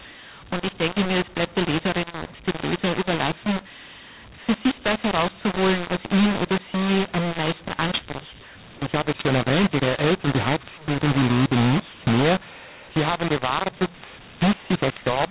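Throughout, the speech shows mu-law and A-law mixed up: samples coded as G.711 A-law are decoded with the mu-law curve. Levels come out scrambled, so the speech sounds harsh and distorted, and pauses fill with noise. The band stops near 4 kHz, which fits 8,000-sample-per-second telephone coding.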